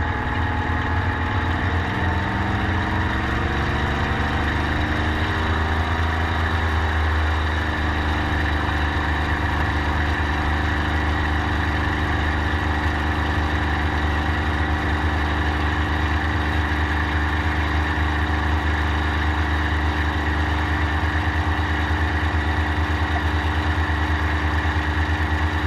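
At 0.35 s a compressed frame reached the decoder with damaged bits, and the decoder played it anyway: a corrupt frame decoded. The misread codes and gain values put energy at frequencies where it doesn't belong, lasting only about one frame. The result is a brief, isolated blip at the very start of the audio, a short burst of stray tone and noise peaking around -25 dBFS.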